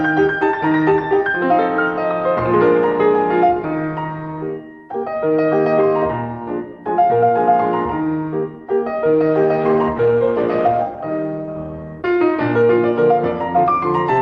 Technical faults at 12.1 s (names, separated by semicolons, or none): call bitrate drop